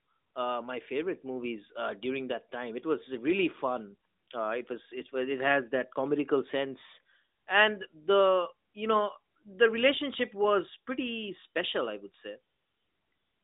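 No technical faults can be heard in this recording.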